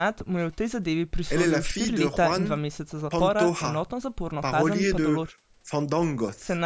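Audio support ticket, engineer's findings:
No faults found in the speech recording. The call microphone processing is audible as expected, with nothing above 8 kHz and the lowest bass taken out by its high-pass filter.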